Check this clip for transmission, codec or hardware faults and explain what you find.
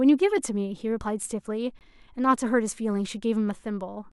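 One fault shows up in this speech clip, a gap between stream segments at 1.79 s. Two neighbouring chunks of the stream don't quite line up on their timestamps, so the player plugs the 18.7 ms hole with silence. Its position fits a segment boundary on 2-second segments. You hear a brief, hard-edged dropout, a tiny clipped-off blank in the sound, but nothing actually goes missing; the audio just gets pushed later by that sliver.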